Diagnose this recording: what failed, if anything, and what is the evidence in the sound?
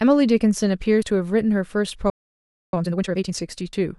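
Compressed frames skipped, at the codec stage: the speech jumps ahead at 1.02 s and 3.73 s, where about three frames went missing, losing roughly 50 ms and 30 ms of speech.

Playback stall: the speech stops dead from 2.10 s to 2.73 s, a 630 ms silence, likely from the player's buffer running dry or its thread being blocked.

Time-compressed catch-up at the playback stage: from 2.73 s to 3.35 s the speech runs at 2x speed at normal pitch.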